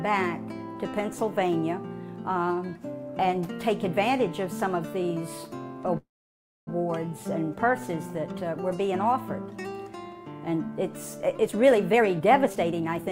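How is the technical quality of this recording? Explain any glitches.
There are two clear glitches, a stall in the middle and a rushed stretch right at the end.

From 5.97 to 6.69 s there's a call audio freeze. The sound hangs and then drops to silence for about 610 ms before picking up exactly where it left off. That's likely packets getting held up in transit so the jitter buffer ran dry, with the receiver stretching the last bit of sound until data showed up. Nothing is lost, but about 0.7 s of extra delay gets wedged into the stream.

From 11.38 s to the end at 13.11 s there's a jitter buffer speed-up, running at about 129% speed. Pitch stays put, but it sounds clearly hurried. The buffer was holding more audio than it wanted, so the receiver kept snipping out tiny pitch-period-sized slices, roughly half a second in total, to claw the delay back down. The tempo is noticeably compressed until the clip ends.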